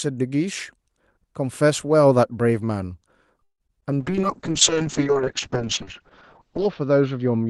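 At 3.43 s the audio stalls until 3.62 s: the last sound is stretched into a fading buzz that drops to silence for about 80 ms before the stream resumes where it left off. This is a call audio freeze, likely from packets delayed in transit draining the jitter buffer, adding roughly 160 ms of delay with nothing lost.

Two instances of short concealed packet loss follow, at 3.68 to 3.71 s and 3.81 to 3.84 s. In each, about 20 ms of audio never reached the decoder. The receiver papered over the hole by extending the preceding sound, heard as a brief smear or wobble.

From 3.86 to 4.12 s the jitter buffer slow-down is audible. The receiver rebuilt its reserve by repeating single pitch periods, running the audio at about 88% speed with unchanged pitch and adding 37 ms. Sounds are drawn out.

At 4.0 s a call bitrate drop sets in and lasts to the end. The encoder fell from a rate consistent with 32 kbps to one consistent with 6 kbps, holding at the bottom for about 2.7 s. 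Bandwidth narrows from 12 kHz to 8 kHz, so the sound turns muffled and rough, which fits an Opus coder under a starved budget.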